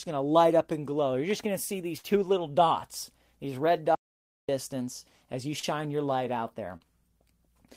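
At 1.97 to 2.05 s, just after "just going to see" and before "little dots these red", there is a burst of packet loss. About 60 ms of the speech never arrived, and the receiver covered the hole by carrying the last sound forward for about 60 ms while fading it down. What you hear is the last sound held and sagging, then the speech picks up further along. On a spectrogram the carried-forward sound runs flat and steady across the gap and dims toward its end, instead of changing as real speech does.

From 3.95 to 4.49 s, right after "little dots these red", there is an audio dropout to silence. For about 0.54 s the signal is silent, likely from the input briefly disconnecting or the link failing while recording continued. The cut is abrupt at both ends, with no room tone in between. The waveform shows a dead flat line, and the spectrogram shows a fully black band where even the background noise floor vanishes.

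Two instances of short concealed packet loss follow. At 5.59 to 5.65 s about 40 ms went missing and 32 ms of synthesised fill stands in for it, heard as a tiny smear or wobble. At 6.77 to 6.86 s, just after "your light out", 40 ms was lost and 36 ms was filled, with around 15 ms of extra length added, so the sound stretches slightly. On a spectrogram each shows as a narrow patch of blurred, repeated texture with a soft seam back into clean speech.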